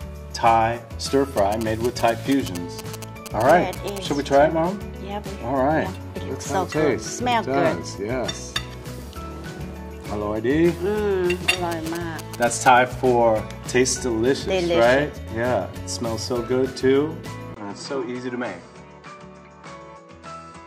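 From 1.38 to 3.98 s and 11.72 to 12.68 s, GSM signalling bursts rectified from a nearby 2G phone gallop as a dit-dit-dit of short 217 Hz buzzes, showing as grouped vertical stripes on a spectrogram.

At 17.54 s a 20 ms gap appears, then the sound dulls, with nothing above 8.7 kHz and a faint new hiss. The spectrogram's top band vanishes, likely from the input switched to a poorer device.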